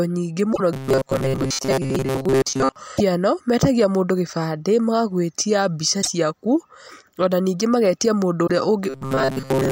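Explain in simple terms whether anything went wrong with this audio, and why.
Two things went wrong. Short chirps or blips at 0.49 to 0.61 s, 2.94 to 3.01 s, 5.99 to 6.08 s and 8.44 to 8.50 s come from damaged data in a compressed stream. Bits of the file were spoiled, so the player briefly lost its place.

From 0.73 to 2.76 s, and again from 8.90 s to the end, the speech turns into a stiff, metallic buzz near 133 Hz. This is robotic sound from repeated short buffers. The likely cause is audio arriving too slowly. The player kept repeating a tiny slice of roughly 7.5 ms, so most of the real sound there was replaced.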